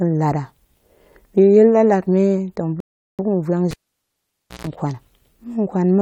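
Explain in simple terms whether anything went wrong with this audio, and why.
Two things go wrong in this speech recording.

From 2.80 s to 3.19 s there is a rebuffering stall. The player ran out of downloaded audio and had to wait for more to arrive, so the speech drops to silence for about 0.39 s. When it comes back, it picks up exactly where it stopped. Nothing is skipped, but that pause is added to the playback time.

From 3.71 s to 4.67 s the cable is pulled and plugged in again while the sound is live. There is a pop when it comes out, and then near silence for about 0.9 s. As the plug goes back in, only its tip touches at first, which gives a short burst of mains buzz lasting about 0.14 s at 60 Hz. A second pop follows as the connection seats and the speech returns.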